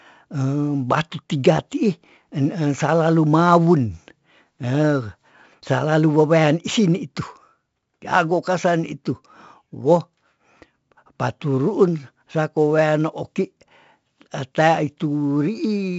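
A gritty hiss rides on every loud syllable from start to finish, attacks sound roughened, and nothing reaches above about 7.7 kHz. This is heavy 4-bit ADPCM compression. Each sample is coded as a coarse step from a prediction, and the band limit fits a 16 kHz rate at 64 kbps.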